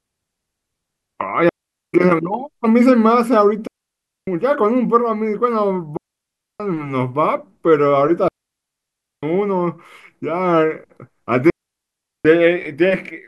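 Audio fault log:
1.49–1.93, 3.67–4.27, 5.97–6.60, 8.28–9.23 and 11.50–12.25 s, digital wireless dropout: the receiver briefly lost the link and muted the speech for 0.44 to 0.95 s. Each gap shows as a flat waveform and an empty spectrogram column, with no noise burst at either edge.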